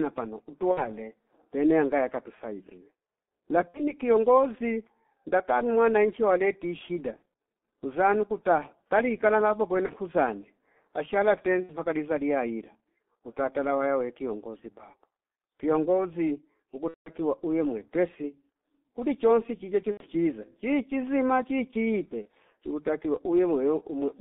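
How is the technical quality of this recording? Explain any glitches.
The speech is poor throughout, with heavy G.723.1 codec damage. This low-rate telephony codec runs near 6.3 kbit/s in 30 ms frames. It confines the sound to roughly 200 Hz to 3.6 kHz, so the voice is muffled, hoarse and smeared at consonants.

There are eight dropouts from VoIP packet loss concealed by the speech codec. They fall at 0.71, 3.68, 7.16 (after "ndatalu mwananchi waleti shida"), 9.86 (before "kuzanye ashala"), 11.63, 16.88, 19.91 and 22.22 s. Lost frames were rebuilt from the previous pitch and filter with falling gain. Each gap becomes a buzzy tone or coloured noise that fades. The longest runs about 0.2 s, just before "uwe mwepesi kuli chonsi".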